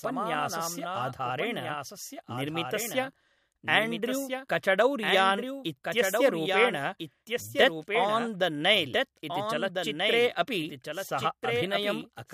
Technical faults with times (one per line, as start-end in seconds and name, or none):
0.00-12.34 doubled audio track